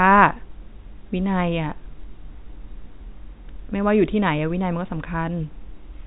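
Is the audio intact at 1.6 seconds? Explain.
Yes, the audio is intact at 1.6 seconds, with the speech carrying through cleanly at that point.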